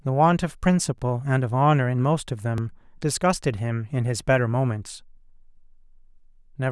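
New audio twice failed to reach the playback device in time, so it replayed its last buffer, a piece about 10.7 ms long that fits a 256-sample buffer. This repeated buffer sounds at 0.98 to 1.00 s, where the piece plays three times over, and at 2.58 s, where it plays twice. Each hard join comes through as a brief buzzy click in the speech rather than a clear stutter, and no audio seems to go missing.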